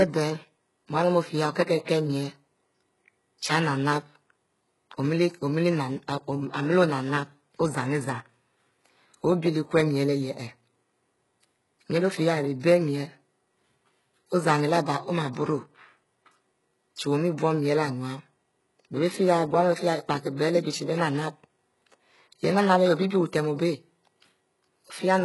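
Throughout the speech, the treble has a synthetic, gritty quality: sibilants come across lispy and metallic, and nothing is present above 11.4 kHz. The likely cause is heavy HE-AAC compression at a very low bitrate, around 12 kbps. Only the lower spectrum is coded directly, and the upper band is rebuilt by copying lower content upward under a coarse envelope. The harmonics in that rebuilt region no longer line up with the real ones.

Pre-echo occurs three times: from 1.85 to 1.88 s (about 30 ms), from 12.60 to 12.63 s (about 35 ms) and from 20.36 to 20.39 s (about 29 ms). Each time, a short hiss arrives just ahead of a sharp onset, and the attack itself sounds softened and smeared. The codec spread quantisation noise across a whole transform block, so noise scaled to the loud attack leaked into the quiet stretch before it.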